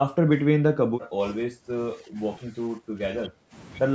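An echo canceller likely mistook the talker for loudspeaker echo while both sides spoke, so the speech is suppressed in double talk from 0.00 to 1.24 s, 1.46 to 1.73 s, 1.95 to 2.20 s, 2.40 to 2.58 s and 2.76 to 3.54 s, dipping by up to about 20 dB.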